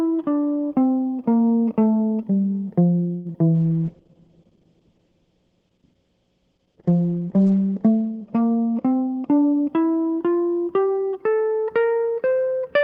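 At 3.15 s the music stalls briefly from a late packet: the jitter buffer ran dry, so the receiver held the last sound for about 97 ms until the packet came, then resumed where it left off. A spectrogram shows a frozen, smeared stretch of harmonics there, and the waveform shows a short steady-amplitude plateau. Nothing is lost, but the line lingers.

At 3.33 s comes a short concealed packet loss: 20 ms never reached the decoder, and the receiver extended the preceding sound to bridge the gap before blending back. It is heard as a tiny smear or wobble, and it appears as a narrow blurred sliver on the spectrogram.

From 3.55 s to 9.36 s a call bitrate drop takes the stream from 32 to 9 kbps, holding at its lowest for about 4 s. Opus coded coarsely and cut the audio bandwidth from 20 kHz to 8 kHz, so the music turns muffled and watery. On a spectrogram everything above 8 kHz goes dark.

From 8.93 s to 9.68 s a jitter buffer speed-up plays the music about 13% fast at unchanged pitch. 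The receiver cut short pitch-period slices, roughly a tenth of a second in total, so the tempo pushes ahead and the rhythm feels rushed. The waveform shows compressed note spacing with small splice joins.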